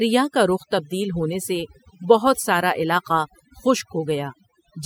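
Throughout the speech, overdone noise removal is at work: frequency bands near the tool's noise estimate are cut almost to nothing, taking quiet speech detail with them. Unlike a noise gate, which silences everything at once, the pauses keep twinkling specks.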